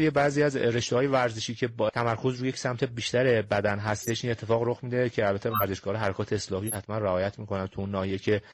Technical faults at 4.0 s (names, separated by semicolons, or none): corrupt frame decoded